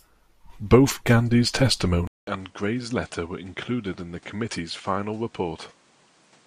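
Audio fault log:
2.07–6.47 s, input switched to a poorer device: after a 200 ms silence, the speech returns duller and roughly 10 dB quieter. Nothing reaches above 10.5 kHz, and a faint new background noise appears, which suggests input likely moved to a narrower-band microphone mid-recording.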